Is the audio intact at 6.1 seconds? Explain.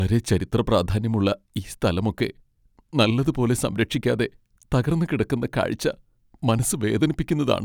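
Yes, the speech at 6.1 seconds plays through intact, with no dropout, click, distortion or other technical fault at that point.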